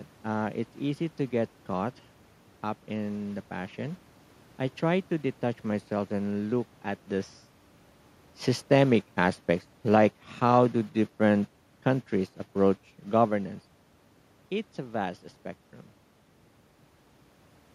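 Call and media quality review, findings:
Speech and background sink together, about 3 dB, 8.68–11.59 s, before "countries approach governance". Automatic gain falling: AGC read the input as too loud or its background noise as too strong, and eased its gain down.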